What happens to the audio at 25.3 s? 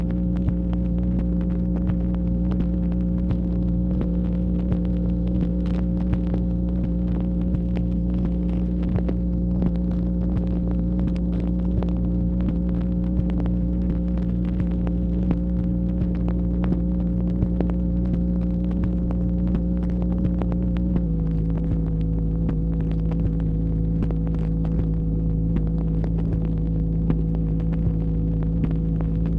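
At 25.3 s the sound is slowed and pulled down in pitch by about 1.5 semitones, running at 0.92 times normal speed from 21.06 s to the end of the clip. This is a wrong sample rate, which fits 24 kHz material being played at 22 kHz without conversion.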